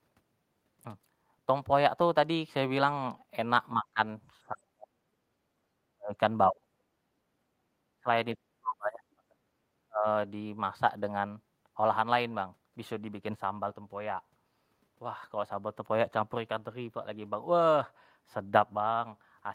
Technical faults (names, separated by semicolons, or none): speech suppressed in double talk